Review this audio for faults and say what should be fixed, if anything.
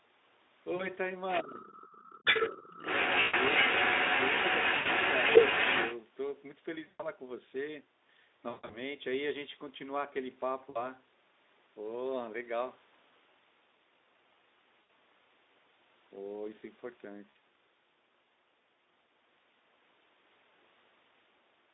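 VoIP packet loss concealed by the speech codec occurs at 0.75–0.92 s, 3.21–3.34 s, 4.77–4.88 s, 6.87–7.10 s, 8.49–8.77 s, 10.69–10.85 s, 14.83–14.91 s and 17.29–17.37 s. The missing audio ranges from 40 ms in the first gap to 180 ms around 8.5 s, where the losses are scattered across roughly 240 ms and the longest unbroken run is 140 ms. With no incoming data, the decoder keeps repeating its last pitch period and spectral shape while turning the gain down, so each gap sounds like a stretched, buzzy tone or coloured noise fading away. The voice stays weak for a short while after the audio resumes. On a spectrogram, each gap shows harmonics running flat and unchanging, then dimming. On the waveform, it appears as a smooth, repetitive, shrinking envelope. To prevent this, use forward error correction or a deeper jitter buffer, and fix whatever is dropping packets on the network path.

Other side's voice leaking through appears briefly at 1.29–1.40 s, about 5 dB below the talker. 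It returns for longer at 1.72–2.62 s and 2.86–5.97 s, now a few dB louder than the talker. A second voice sits under or over the main one. The likely cause is loudspeaker playback reaching the microphone and the echo canceller not removing all of it. On a spectrogram, a second set of harmonics, unrelated to the talker's, shows up within the band. To prevent this, use a headset, or give the echo canceller a longer tail and better convergence.

Speech suppressed in double talk occurs at 1.42–1.78 s and 2.50–2.86 s. The talker's level drops by around 20 dB in the first stretch and around 25 dB in the second, so the voice sounds ducked. The likely cause is the echo canceller failing to separate the local talker from the echo and attenuating both. On a waveform, these stretches show as sudden notches in the envelope. On a spectrogram, the harmonics briefly go pale across the band. To prevent this, tune the double-talk detector so that it does not suppress speech when both sides talk at once.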